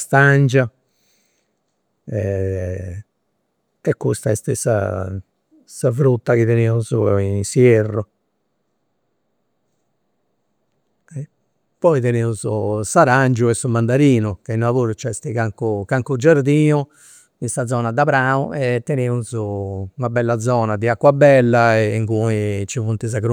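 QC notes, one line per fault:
17.49–19.28 s, drift correction step: the speech abruptly runs about 5.7% fast, with pitch and tempo rising together by roughly 96 cents, close to a semitone, so the voice sounds briefly detuned and hurried before snapping back to normal at 19.28 s. Because speed and pitch move as one, this is a resampling change rather than time-stretching, likely from clock-matching software jumping its playback rate in one step to rebalance its buffer.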